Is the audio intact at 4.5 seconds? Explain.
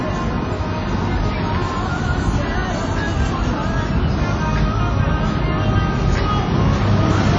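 No. At 4.5 seconds the everyday sound carries plainly audible codec damage, as it does for the whole clip. This is likely WMA compression. Nothing is left above 9.7 kHz. The top end is dull, and the sound rings and washes. A hiss rises and falls with the signal. The codec quantises long transform blocks, so the noise smears over tens of milliseconds and weak detail is zeroed. That fits a low bitrate, around 32 kbps.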